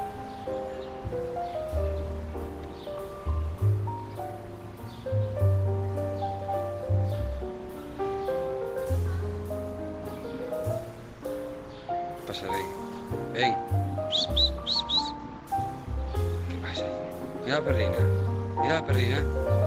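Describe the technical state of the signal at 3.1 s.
At 3.1 s the signal is intact, with no audible fault at that moment.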